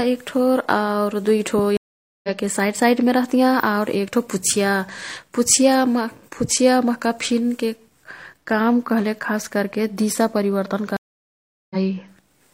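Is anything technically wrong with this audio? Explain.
Yes. There are two stream reconnects. The first runs from 1.77 to 2.30 s, after "एक्ठो आऊ दुईठो". The second runs from 10.97 to 11.76 s, after "कह्लेक खासकर्के दिशा परिवर्तन". In each, the connection dropped and the player went silent. It then reconnected and started a fresh decoder mid-stream. The gaps last about 0.47 s and 0.74 s. The speech then picks up further on, roughly half a second later the first time and about 0.3 s later the second time. Some speech is simply skipped.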